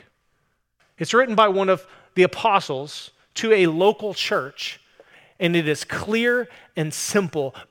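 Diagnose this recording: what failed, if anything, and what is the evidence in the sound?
Sample clock jitter in the converter, from 3.65 s after "the apostles to a": a wobbling clock mistimes samples, adding roughness on loud, bright speech.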